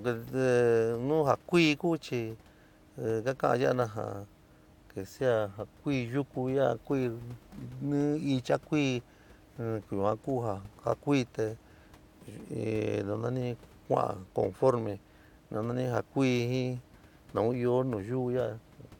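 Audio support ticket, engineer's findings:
No faults found in recording.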